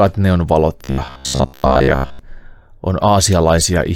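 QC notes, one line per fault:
0.84–2.19 s: robotic sound from repeated short buffers. Most of the real audio there is skipped while a 15 ms block loops, likely from late-arriving data. This forces a fixed 66.8 Hz metallic buzz, which shows on the spectrogram as evenly spaced, flat harmonic stripes.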